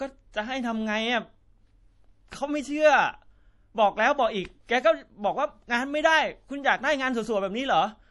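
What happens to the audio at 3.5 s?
At 3.5 s, as throughout, MP3 compression: likely a starved encoder near 48 kbps removes everything above 11.5 kHz and flickers weak frequency lines, sounding watery.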